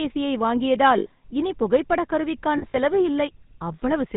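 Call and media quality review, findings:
GSM full-rate codec damage, whole clip: buzzy, gravelly speech, nothing above 4 kHz. The vocal-tract model is driven by sparse regular pulses, which fits a 13 kbps GSM full-rate path. Plainly audible roughness throughout.

Lost GSM frames, 0.98–1.08 s: an 80 ms rough, metallic ring where the concealment repeats the last good frame's settings. At 2.58–2.77 s, similar dropouts scattered over 160 ms, each roughly 40 ms at most, giving brief metallic smears.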